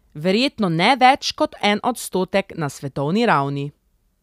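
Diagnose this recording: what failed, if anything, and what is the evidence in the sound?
No failure is audible anywhere in this speech recording.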